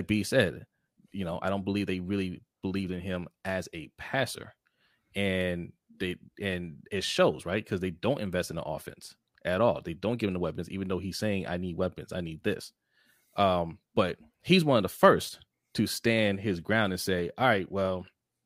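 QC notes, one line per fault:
No faults heard.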